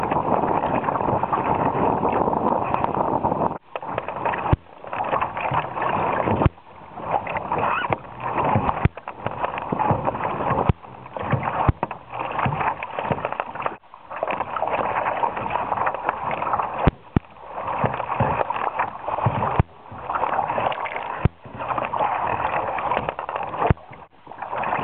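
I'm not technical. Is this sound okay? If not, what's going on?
No. There are overlapping chunks: the audio was handled in 4-second pieces, each starting slightly before the previous one ended, so about 0.1 s repeats at 2.75, 6.85, 10.95, 15.05, 19.15 and 23.25 s. Unlike a dropout, nothing goes missing. At each join a short piece plays twice, heard as a brief stutter, evenly spaced.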